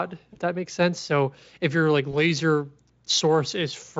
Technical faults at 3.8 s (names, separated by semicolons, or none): none